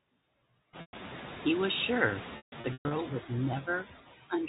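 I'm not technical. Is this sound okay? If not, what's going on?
No. Two problems can be heard.

Noise suppressor artifacts run through the whole clip. A noise suppressor is a filter that tries to remove steady background hiss. Here it pushes the room's background noise down between words, then lets it come back up underneath them, so the noise seems to pump in and out with the speech. The background grows noticeably louder from about half a second in, which gives the suppressor more to fight against.

Packet loss with pitch repetition happens twice. Pieces of the audio went missing in transit, and the receiving end filled each gap by repeating the last small slice of sound. This briefly stretches the sound into a held, slightly buzzy tone before it fades. The first gap runs from 0.81 to 0.93 s and lasts about 120 ms. The second is worse: between 2.37 and 2.91 s, several short dropouts are scattered across roughly half a second, the longest lasting 150 ms, so the sound stutters and fades in and out there.

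The muffled, telephone-like quality comes from ordinary phone-line coding, which carries nothing above 4 kHz.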